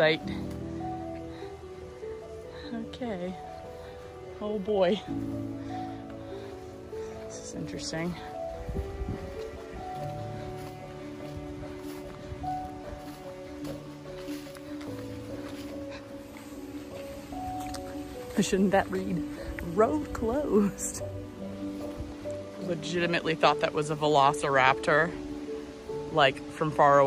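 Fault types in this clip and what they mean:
Nothing stood out on listening; no problem of any kind could be heard anywhere in the clip.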